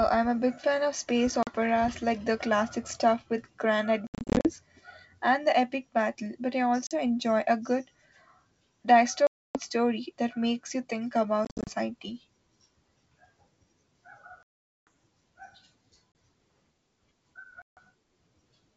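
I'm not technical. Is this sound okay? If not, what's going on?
No. The call suffers packet loss on an ADPCM call: chunks of speech drop to silence, then return slightly distorted, at times with a click or wrong loudness. It happens at 1.43, 4.07 to 4.50, 6.87, 9.27 to 9.59, 11.45 to 11.73, 14.43 to 14.87, 16.12 and 17.62 to 17.79 seconds.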